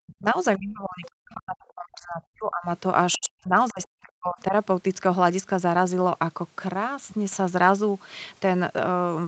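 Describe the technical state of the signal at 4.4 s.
Speech suppressed in double talk runs from 3.71 to 4.54 s: the speech sinks by about 40 dB, likely because an echo canceller mistook overlapping talk for echo.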